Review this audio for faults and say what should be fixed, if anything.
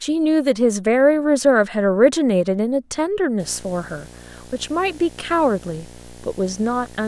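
A raspy buzz with a fizzy hash above it comes in at 3.39 s and runs to the end at 7.08 s, sitting roughly 20 dB below the speech. This is video or display buzz: a screen or video cable is coupling into the audio path, and the buzz repeats at 59.94 Hz, the picture's field rate. To prevent it, reroute audio cables away from video cables and displays, and use balanced, shielded connections.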